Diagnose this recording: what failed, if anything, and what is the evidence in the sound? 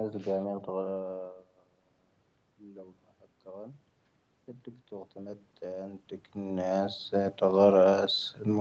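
The fault is in call processing: automatic gain rising. From 4.89 s to 7.9 s, the speech and the room noise swell together by about 9 dB. The gain control judged the input too quiet and raised its gain gradually over those three seconds.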